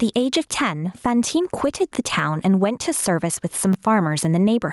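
All the way through there's gain pumping: the sound ducks by around 10 dB under each loud bit, likely a fast limiter fighting too much input gain. Then at 3.72 to 3.74 s the chunks play out of order. One 10.67 ms chunk landed a chunk late, giving a brief jumbled stutter.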